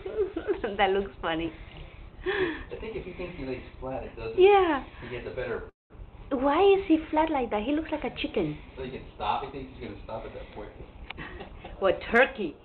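A call audio freeze at 5.69 to 5.92 s: the sound stalls into a brief fading buzz, then about 0.16 s of silence, likely from delayed packets draining the jitter buffer. Jitter buffer speed-up from 11.08 to 12.59 s: the buffer trims short pitch-period slices, so the audio runs about 10% faster at unchanged pitch, shedding roughly 0.15 s.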